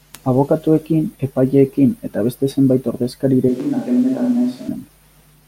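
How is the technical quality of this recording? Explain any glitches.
One glitch affects the speech: a switch to a distant microphone from 3.49 s to 4.68 s. For that stretch the sound turns abruptly roomy and hollow, with thinner bass and more audible room reflections, then snaps back just as suddenly at 4.68 s. The level stays roughly the same, and background noise sits around 30 dB below the speech. The likely cause is that the close microphone's feed dropped out or was omitted and a farther pickup, such as a camera microphone, filled in, capturing more of the room along with the voice.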